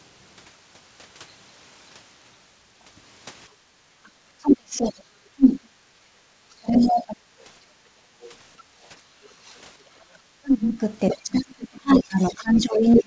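From 3.64 to 7.25 s the speech dips and breaks up, by roughly 35 dB at worst, for about two seconds in total. This is likely speech suppressed in double talk. At 4.84 to 4.91 s a faint second voice slips in, about 30 dB below the speech, likely the other side's voice leaking through. At 6.14 to 6.22 s the room sound drops by about 13 dB, background gated by the echo canceller. From 6.79 to 8.32 s the leaked voice returns, louder at about 20 dB down. From 7.63 to 9.24 s the background is gated again, by about 12 dB, for around a second. From 9.97 s to the end the speech is suppressed once more, by roughly 30 dB. From 11.09 to 13.02 s the other voice leaks through strongly, only about 5 dB below the speech.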